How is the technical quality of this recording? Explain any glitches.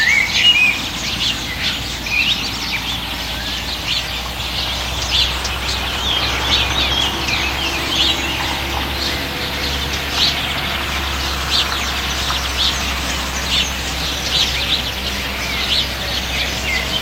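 One glitch stands out: at about 2.03 to 2.07 s, compressed frames are skipped. Whole frames were lost or rejected by the decoder, so the sound jumps ahead by about a tenth of a second. The audio simply jumps ahead at the join with no silent gap, unlike a dropout.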